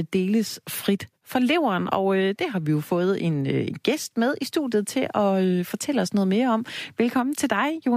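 From 4.55 to 6.69 s the speech drops to low bit depth with dither, about 10 bits. Dither was added before rounding, so the quantisation error turns into steady white noise: an even hiss sitting roughly 45 dB under the signal, with no grainy distortion.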